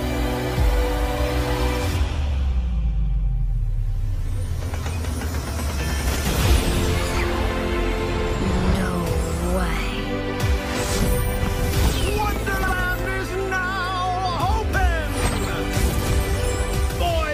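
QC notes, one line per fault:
6.06–6.26 s and 12.62–12.73 s, frames out of order: two neighbouring blocks of frames got swapped, so each stretch plays with its halves exchanged, giving a garbled flutter. The blocks are about 93 ms and 46 ms, which fits four and two frames each. No time goes missing.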